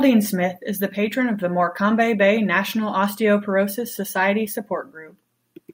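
No technical faults can be heard anywhere in this speech recording.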